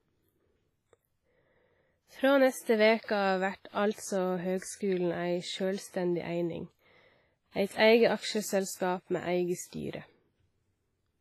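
It's a speech clip with heavy codec damage all the way through, most likely WMA compression at a low bitrate, something like 24 kbps. The transform blocks smear ringing, washy noise around the voice, the hiss breathes with the signal, and nothing survives above 15.4 kHz.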